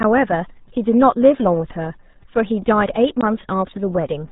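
From start to finish the speech carries RealAudio 14.4 codec damage: heavy low-rate coding, consistent with roughly 8 kbit/s, leaves it muffled and gargly. A spectrogram shows nothing above 3.8 kHz, a flat empty ceiling, while harmonics below smear into blurry bands.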